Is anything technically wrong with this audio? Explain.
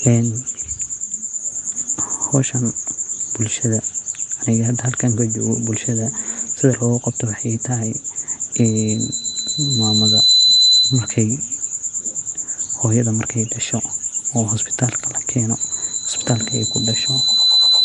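Yes, two problems. Throughout the speech there is a rough, hissy halo with a smeared, underwater quality and nothing above 10.6 kHz. The likely cause is Nellymoser compression: fixed-bit block coding leaves weak bands without bits and fills them with noise. The damage is plainly audible even at 44 kbps.

Loudspeaker feedback squeal occurs from 8.55 to 11.22 s and again from 15.57 s to the end. In each case a microphone picks up its own loudspeaker, and the loop gain exceeds one at 4 kHz. That single tone swells over about one and a half seconds the first time and about two seconds the second, rising to about 10 dB above the speech.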